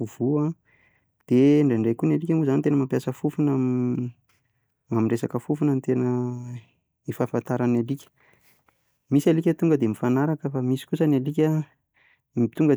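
A speech recording with no audible technical faults.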